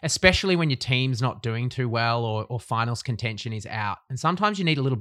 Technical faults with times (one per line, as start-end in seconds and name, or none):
none